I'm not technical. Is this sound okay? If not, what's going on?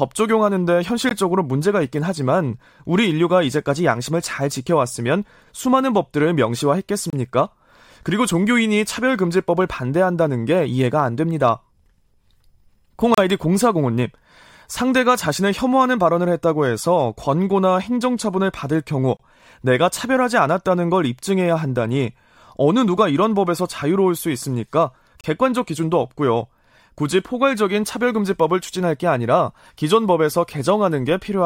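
No, there's a gap between stream segments: brief hard-edged silences at 1.09, 7.10, 13.14, 19.17 and 25.21 seconds, every six seconds, where joined pieces don't quite meet.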